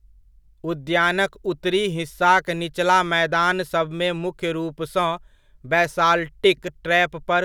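No technical faults are audible.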